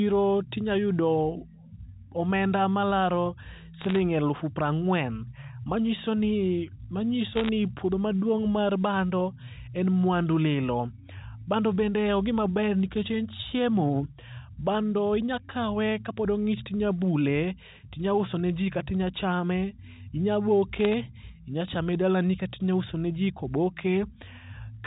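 Around 3.81 to 3.96 s, 7.33 to 7.49 s and 20.80 to 20.94 s you get short bursts of bit errors on a digital phone line. Flipped bits on the G.711 A-law link, about 0.4 to 0.5 percent of them, corrupt single samples, so the speech picks up sharp ticks and crackle.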